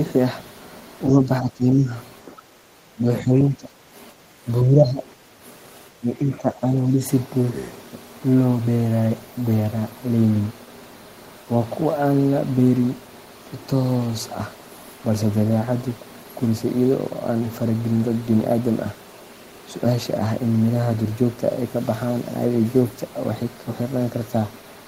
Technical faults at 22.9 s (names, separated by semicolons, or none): none